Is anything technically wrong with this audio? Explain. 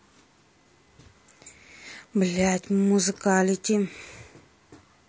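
Yes, two things. Throughout the speech there's plainly audible codec damage, most likely low-delay AAC compression (AAC-ELD). With few bits to spend it quantizes the spectrum coarsely, so at a rate that sounds around 32 kbps the speech comes out rough and grainy, with noise between harmonics and an artificial top end.

Then from 0.62 to 0.66 s there's an AAC frame loss with concealment, which fits one dropped frame. The decoder patched the gap from the last good spectrum, so you hear a brief smeared, noisy or phasey patch rather than silence.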